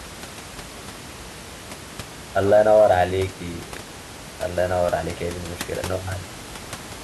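No technical faults are audible.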